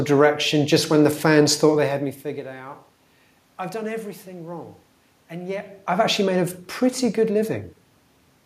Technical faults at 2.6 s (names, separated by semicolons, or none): none